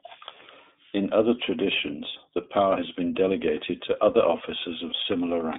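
Throughout the speech, the iLBC codec narrows the band to roughly 200 Hz–3.6 kHz, with nothing above 3.8 kHz. The excitation is coded frame by frame, which fits 30 ms frames at 13.33 kbps and leaves the speech plainly rough and synthetic.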